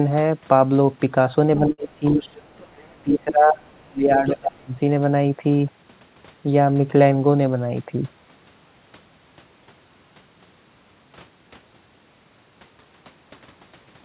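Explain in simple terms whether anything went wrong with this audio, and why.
Speech suppressed in double talk, from 1.59 to 2.29 s and again from 3.03 to 4.73 s. The speech turns sharply quieter and thin, and in places almost vanishes. The likely cause is that both people talked at once and the call's echo canceller could not tell this talker from the echo of the other person's voice, so it turned everything down. Roughly half a second is affected the first time and about a second and a half the second time.

Burst of packet loss, from 1.72 to 1.80 s, inside that first quiet stretch. For about 60 ms a group of audio packets never arrived in time. The receiver kept the last bit of sound going and faded it out, which can be heard as a short held, dying sound. The speech then resumes about 60 ms further on, and the part in between is simply gone.

Other side's voice leaking through, from 2.21 to 3.02 s and briefly from 3.77 to 3.88 s. 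A faint second voice can be heard far behind the talker, very quiet and easy to miss. It is likely the other person's voice coming out of this talker's loudspeaker and being picked up by the microphone, with the echo canceller failing to remove all of it.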